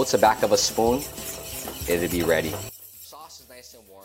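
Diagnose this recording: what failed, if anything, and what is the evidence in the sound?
From 2.69 s to the end at 4.05 s the sound drops by about 22 dB to a faint remnant. That's one channel inverted, likely a reversed-polarity analogue wire, so the mono sum cancels what both sides share.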